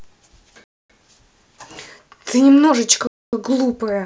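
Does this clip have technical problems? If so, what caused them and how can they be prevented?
Yes, there are two blocks of digital silence, from 0.64 to 0.90 s and from 3.07 to 3.33 s, each 256 ms long. The speech drops straight to silence and comes back with no fade, so you hear a clear hole. Identical lengths suggest whole 4096-sample buffers coming out empty, most plausibly because the program didn't fill them in time. To prevent it, give audio processing a larger buffer or higher thread priority.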